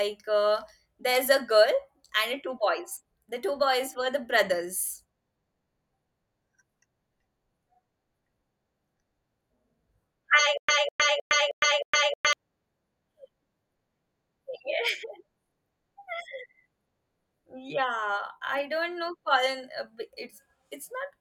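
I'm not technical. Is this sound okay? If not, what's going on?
No. Stutter with silent gaps, 10.58 to 12.33 s: a stalling player likely replays one 0.2 s snippet five times between silences, losing the speech meant there.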